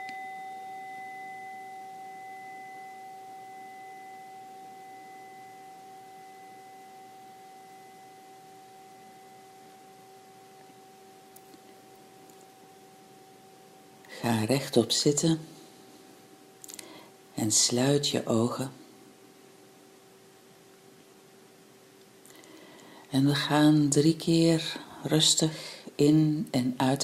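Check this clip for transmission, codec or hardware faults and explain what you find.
No faults can be heard anywhere in the clip. There are no events to time or explain, since nothing in the audio stands out as a defect.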